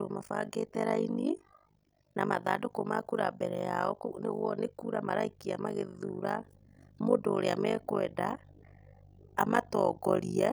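Throughout the speech, the overlap-add stage that rebuilds the signal from windowed frames uses an overlap that fails to sum to a steady gain. The result is overlap-add ripple: the level dips by about 60 dB once per frame, around 50 times a second, giving a harsh, buzzy, robotic flutter.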